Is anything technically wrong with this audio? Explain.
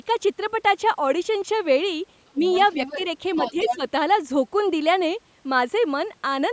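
Yes, two problems show up.

Speech suppressed in double talk occurs at 2.31 to 2.44 s (a deep dip, roughly 25 dB) and at 3.37 to 3.83 s (a milder one, about 10 dB). This is likely an echo canceller ducking both voices while both sides talked at once.

The other side's voice is leaking through at 2.43 to 3.05 s, quietly, about 15 dB under the speech, and again at 3.34 to 3.77 s, louder, only about 5 dB under the speech. This is likely loudspeaker echo that cancellation left in the microphone.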